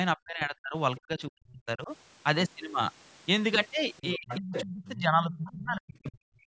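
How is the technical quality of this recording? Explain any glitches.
The recording has two echo-control faults typical of a call.

Speech suppressed in double talk happens three times: 0.16 to 0.75 s, 0.98 to 1.91 s, and 4.15 to 6.4 s. The talker's voice dips sharply, by around 40 dB at its deepest. It is affected for roughly half a second, then most of a second, then about two seconds. The likely cause is both sides speaking at once. The echo canceller could not tell the talker from the loudspeaker echo, so it turned everything down.

The other side's voice leaking through appears at 3.97 to 4.37 s, 4.55 to 4.64 s, 4.85 to 4.9 s, and 5.34 to 5.51 s. A second voice surfaces in brief scraps. The loudest scrap sits about 5 dB below the talker. Others are around 10, 15 and 20 dB down. These scraps overlap the last suppressed stretch. The likely cause is the echo canceller leaving part of the far end's loudspeaker sound in the microphone signal.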